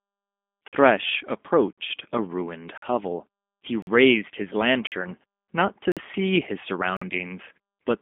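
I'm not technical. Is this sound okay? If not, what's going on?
No. Throughout, the G.729 codec, a phone-call compressor, rebuilds the speech from a simplified model, cutting everything above 3.6 kHz and leaving it thin and slightly robotic.

There are also gaps between chunks at 0.68, 1.73 (just before "a ruined hovel"), 2.78 (just after "a ruined"), 3.82, 4.87 (just before "not to see his"), 5.92 and 6.97 s. Each is a sharp silent hole of about 48 ms, once every second, where playback pauses between pieces of audio.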